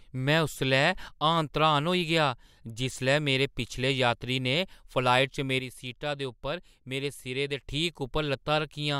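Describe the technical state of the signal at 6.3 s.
At 6.3 s the signal sits inside a sudden gain jump running from 5.60 s to 7.63 s. The level was most likely cut by about 6 dB from one sample to the next, as a gain setting or bit shift applied with no ramp would do, and restored just as abruptly at the end. The speech and the background noise drop together by the same amount, so the whole sound steps down in loudness and then steps back up.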